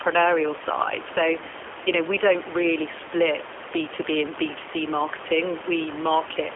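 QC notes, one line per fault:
Throughout, G.729 codec: the speech carries plainly audible codec damage, that rough, slightly synthetic quality you get when a voice is rebuilt from a vocal tract filter, a pitch estimate and a handful of pulses per 10 ms frame rather than sent as a waveform. At 8 kbit/s the band sits roughly 300 Hz to 3.4 kHz, so there's no top end at all, which fits the G.729A variant. The room noise, about 15 dB under the speech, is part of the recording.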